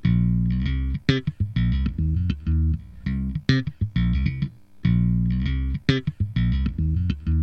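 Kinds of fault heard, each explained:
No fault can be heard in this everyday sound recording: the signal does not break up, and the sound continues without gaps, repeats or added noise.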